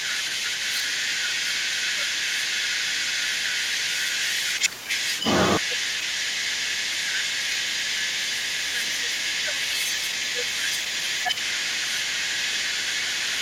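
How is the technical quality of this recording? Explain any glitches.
The recording has two linked problems from a speakerphone call, and both run through most of the clip.

The other side's voice is leaking through for the whole recording, from start to end. It sits roughly 5 dB above the talker, so it is hard to ignore. This is likely a loudspeaker echo that the echo canceller failed to strip from the microphone.

Speech is suppressed in double talk five times: 0.05 to 2.65 s, 3.29 to 3.98 s, 4.59 to 4.91 s, 5.61 to 8.08 s and 8.73 to 11.11 s. The talker dips by around 10 dB in pieces. This is likely the canceller turning everything down while both sides overlap.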